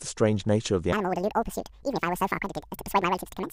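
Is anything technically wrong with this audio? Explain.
Yes. From about 0.93 s to the end, there's a wrong sample rate problem. The speech suddenly runs twice as fast and jumps a full octave (12 semitones) higher, chipmunk-style. That fits audio recorded at 24 kHz being played back at 48 kHz without conversion.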